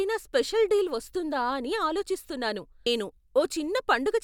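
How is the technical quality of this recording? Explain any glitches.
One glitch stands out in this speech recording. A stream segment skipped at about 2.86 s: the audio jumps abruptly forward with a brief blip, as though a stretch of material has gone missing. The likely cause is a segmented stream in which one chunk failed to load, so the player moved straight on to the next one. Whatever fell inside that chunk is simply absent, and the splice between the two surviving pieces is what produces the click-like blip.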